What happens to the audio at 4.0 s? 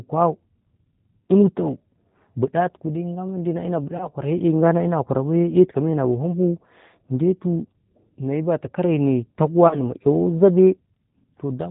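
VoIP packet loss concealed by the speech codec occurs from 3.97 to 4.10 s. About 30 ms of audio, likely a single lost packet, was filled by extrapolating the last pitch and filter at falling gain, so the sound is stretched into a buzzy tone or coloured noise that fades, then stays weak or distorted until about 4.10 s. The G.729 codec at 8 kbit/s also affects this moment, as it does the whole clip, leaving nothing above 4 kHz and a slightly rough, synthetic quality.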